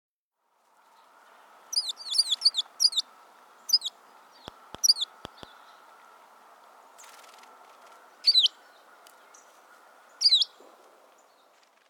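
From 4.48 to 5.44 s a train of clicks sits over the sound. About four sharp, similar pops arrive at roughly three per second, unevenly spaced, and stand out above the audio. Likely cause: nearby electrical interference or a faulty connection or power supply.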